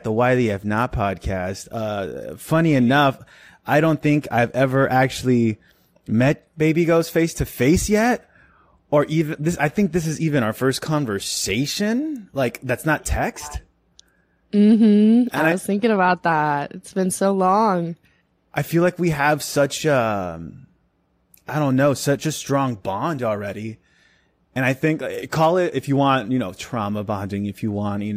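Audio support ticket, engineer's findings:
No audible faults found on playback; nothing to escalate.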